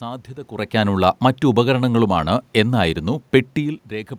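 No system faults are audible in the speech; the room noise and the level shifts near the start and again near the end, where the talker moves relative to the microphone, belong to the recording itself.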